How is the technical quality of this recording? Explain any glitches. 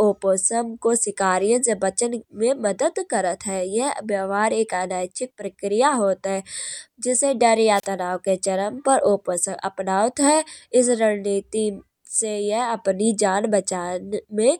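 One glitch stands out: a wireless microphone squelch dropout between 7.74 and 7.86 s. The analogue FM radio link from the microphone faded, and when the received signal became too weak, the receiver's squelch circuit muted its output rather than pass raw static. In the audio, the speech breaks briefly and drops into near silence for about 34 ms before the signal recovers and the speech returns.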